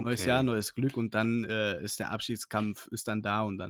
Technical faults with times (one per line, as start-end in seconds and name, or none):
none